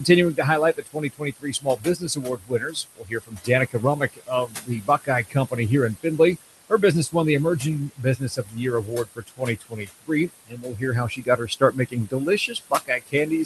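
Noise suppressor artifacts run through the whole recording. The suppressor pulls down whatever it judges to be steady room noise by about 17 dB, frame by frame, so the background, which sits only about 13 dB under the talker, dips in the gaps and swells back beneath each phrase. That pumping sets it apart from the codec's own coding noise. The Opus path, band-limited near 12 kHz, sounds dull at the top but steady.

Speech cut by the noise suppressor overlaps this in three stretches. From 0.0 to 5.59 s the suppressor mistakes parts of the speech for noise, with drops of up to about 22 dB spread over roughly three seconds. Between 5.94 and 7.15 s it happens more briefly, only a fraction of a second in all, with drops of up to about 20 dB. From 7.59 s to the end, cuts again reach about 22 dB. Soft consonants and word endings sound swallowed rather than clipped or muted outright. The level sinks smoothly with the background, which is how this differs from packet loss or a dropout.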